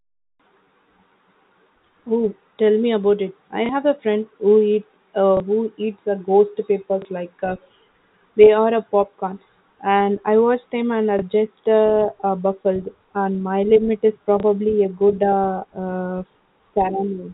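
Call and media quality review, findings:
Packet loss with last packet repeated: brief blips at 3.66, 5.37, 7.02, 11.19, 14.40 and 16.32 s, each 30 ms. Likely a jitter buffer or decoder concealment replaying the last packet over one lost packet, with the repeat misaligned to pitch. G.711 narrowband path unaffected.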